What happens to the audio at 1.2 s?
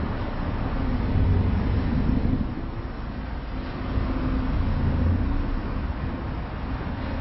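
At 1.2 s the sound is dull and smeared, with a watery, warbling texture on anything sustained and a fizzy edge where there should be crisp detail. Nothing is heard above 5.6 kHz, and this character runs through the whole clip rather than starting there. The likely cause is heavy AAC compression: AAC-LC at a very low bitrate, around 16 kbps, sharply lowers the cut-off frequency and quantises the remaining bands so coarsely that gaps and substitute noise appear in the spectrum.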